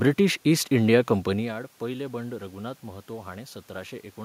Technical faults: none

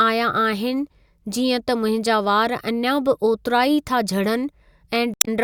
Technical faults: damaged data in a compressed stream

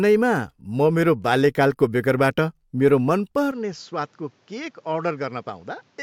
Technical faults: input switched to a poorer device

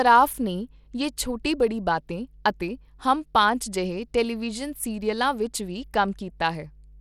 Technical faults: mains hum; Bluetooth SBC compression

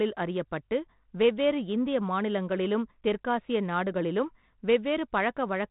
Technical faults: none

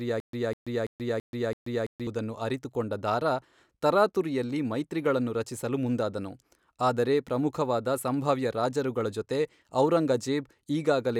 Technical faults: stutter with silent gaps

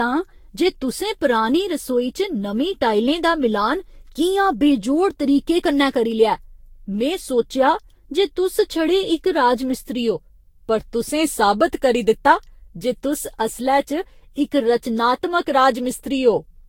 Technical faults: generation loss

